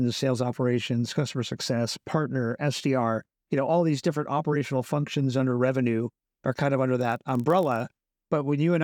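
Block size mismatch (padded) from 6.99 to 7.81 s, after "are kind of under": zero-filled gaps in each block, fitting 1024-sample reads, buzz at 46.9 Hz.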